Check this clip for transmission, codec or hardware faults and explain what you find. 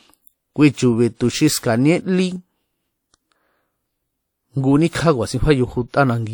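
Pre-echo appears twice in this speech: a 58 ms smear from 1.15 to 1.20 s just before "xu xi", and a 29 ms one from 4.90 to 4.93 s. The transform codec's block-wide quantisation noise leaks ahead of each sharp onset, giving a short hiss and blurred attack.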